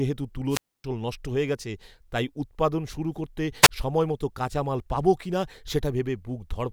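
Wireless microphone squelch dropouts occur at 0.49–0.84 s and 3.62–3.69 s: the FM radio link fades, hiss rises, and the receiver's squelch mutes output, leaving near silence of 270 ms in the first and 26 ms in the second before speech returns.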